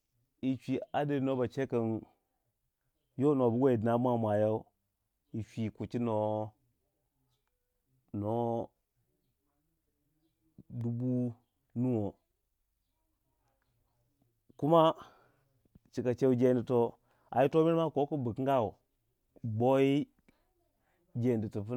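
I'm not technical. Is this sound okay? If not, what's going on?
No, there's one small glitch. At about 10.81 s the speech drops out for less than a thousandth of a second: a block of digital silence, where the audio briefly turns to silence and back. That abrupt cut makes a tiny tick.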